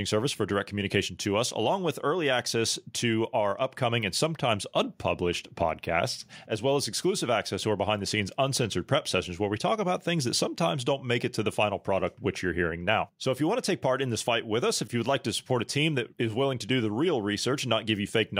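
No audible technical faults turn up anywhere in the recording.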